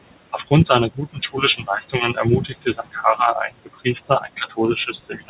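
Noise suppressor artifacts run through the whole clip. The suppressor pulls the room noise down by about 21 dB wherever it judges the sound to be steady noise, so the background sinks in the gaps and swells back under the speech.

From 0.11 s right to the end at 5.29 s there's also speech cut by the noise suppressor. It mistakes parts of the speech for noise and turns them down with the background, by about 22 dB at the deepest, so soft consonants and word endings come out swallowed and faint. That room noise sits only about 15 dB below the speech, and everything stops at 4 kHz, which fits a 64 kbps G.711 mu-law call path.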